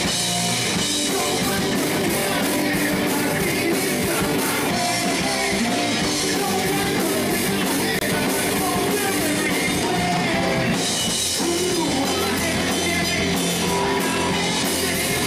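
At 7.99 to 8.03 s, a corrupt frame muted leaves an abrupt 36 ms hole, fitting one rejected frame. Timing stays intact, unlike a skip or smoothed concealment.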